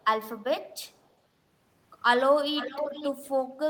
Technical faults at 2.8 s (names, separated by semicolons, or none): echo leak